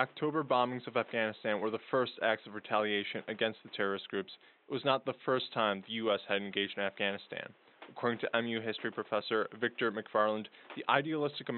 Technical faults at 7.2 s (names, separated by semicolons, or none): none